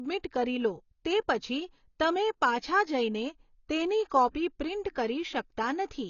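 The speech here has most likely been through AAC compression at a low bitrate, with a lean AAC-LC encoder whose behaviour fits a budget of around 24 kbps. To save bits, the encoder discards the top of the spectrum and quantises what remains coarsely. Throughout the clip, nothing is left above 7 kHz, so the audio sounds dull and closed-in. The codec damage is plainly audible as smeared, warbling texture on sustained sounds and a fizzy edge on sibilants.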